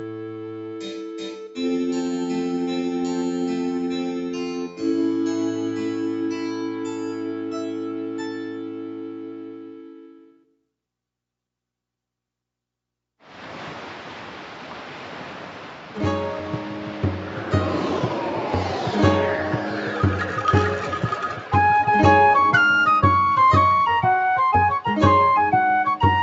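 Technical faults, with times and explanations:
Throughout: noise suppressor applied to music or sounds. A suppressor built for speech treats steady, sustained parts of the sound as noise, so the level swings by around 10 dB. On the waveform the envelope pumps. On a spectrogram, held bands fade between onsets, below the call path's normal 8 kHz ceiling.
0.0–10.53 s: sound cut by the noise suppressor. For about ten seconds the suppressor classed the sound as noise and pulled it down by up to about 12 dB. Steady or decaying portions sink or end early, while sudden attacks pass. The waveform shrinks, and the spectrogram dims with clipped tails.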